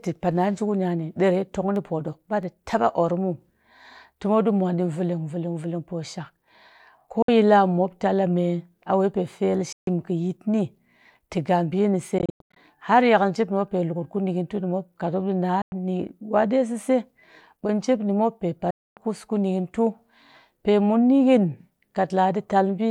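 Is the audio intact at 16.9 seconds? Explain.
Yes, at 16.9 seconds the speech plays through intact, with no dropout, glitch or other fault at that moment.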